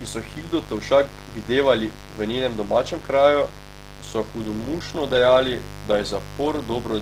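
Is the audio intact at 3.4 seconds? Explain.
No. At 3.4 seconds the speech carries two faults that run through the whole clip. The first is mains buzz: switching spikes from a dimmer, rectifier or unshielded cable leak in twice per 50 Hz cycle, so the interference is a stack of harmonics of 50 Hz climbing well into the kilohertz range, sitting roughly 15 dB below the speech. That harmonic stack sets it apart from plain hum. A clean hum is a smooth, low drone, while this is a steady, raspy buzz with an edge that stays audible in the pauses.

The second is damage most likely caused by Opus compression. The speech sounds rough, grainy and hoarse, which fits a low bitrate around 16 kbps, where the encoder works in its hybrid mode and fills bands it cannot afford with folded or noisy content. The bandwidth stays wide, with content reaching about 20.2 kHz. What distinguishes it from MP3 artefacts is that it swirls less, with few watery holes in the spectrum. 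The texture is gritty throughout instead.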